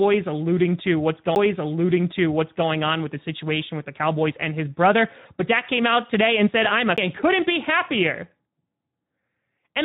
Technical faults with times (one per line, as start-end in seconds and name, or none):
0.00-9.84 Speex codec
1.35 CD skip
6.96 CD skip